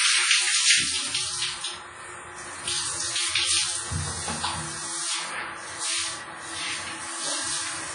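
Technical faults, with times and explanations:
Throughout, WMA compression: everything above about 10.1 kHz is gone, and the sound rings and smears with a washy hiss that swells and fades with the signal. That's likely heavy WMA encoding, fitting a low bitrate near 24 kbps, where long transform blocks spread noise and drop weak detail.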